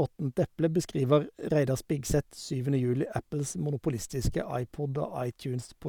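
Nothing stood out on listening to this recording of speech.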